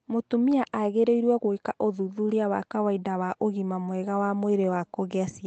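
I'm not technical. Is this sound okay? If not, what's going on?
Yes, this one's fine: there's nothing wrong to point out here, and the slightly narrow, phone-call quality you might notice is just the normal sound of audio sent over an internet call.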